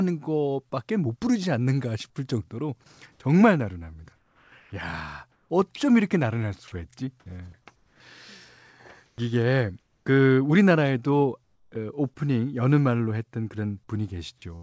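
Speech that likely passed through a voice detector with discontinuous transmission, heard over a call path with nothing above 8 kHz. Onset clipped by the voice detector occurs at 2.14 s and 9.15 to 9.18 s, where speech starts abruptly. On the waveform, full amplitude begins without a rising edge. Comfort noise in place of the background appears at 3.12 to 3.20 s, 4.16 to 5.80 s, 7.76 to 8.00 s, 9.06 to 10.06 s and 11.44 to 11.72 s. There the real background gives way to steady, featureless hiss, about 3, 7 and 9 dB quieter in three of these gaps, and shows as flat, uniform spectrogram texture. Sound dropped by the voice detector at 5.76 to 5.80 s loses roughly 20 ms of speech to that noise, leaving a brief notch in the waveform envelope.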